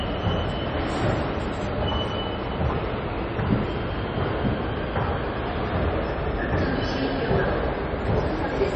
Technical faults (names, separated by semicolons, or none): MP3 compression